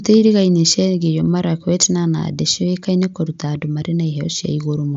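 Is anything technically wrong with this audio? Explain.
No, nothing is technically wrong: the speech comes over an mSBC Bluetooth headset link working as designed, with audio bandwidth reaching about 8 kHz.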